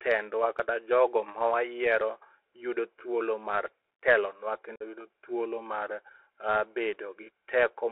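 From start to finish the speech carries the Bluetooth CVSD headset codec, and its damage is plainly audible. The sound is confined to roughly 200 Hz to 3.4 kHz, which fits a 64 kbps CVSD link. The one-bit delta modulator's adaptive step can't keep up with fast, loud high content, so sibilants turn scratchy and a granular hiss sits under everything. A plain telephone band-limit would sound dull but clean. This codec's rough, grainy texture is what gives it away.

Between 4.76 and 4.83 s comes unconcealed Bluetooth headset packet loss. About 45 ms of audio drops out, which points to several consecutive headset packets failing to arrive and being replaced with silence or an idle pattern rather than patched over. The hole has hard edges and the speech resumes quieter for a moment while the CVSD step size recovers. Network jitter-buffer concealment would smear or repeat sound to cover a gap like this, whereas this one is simply a clean, abrupt cut.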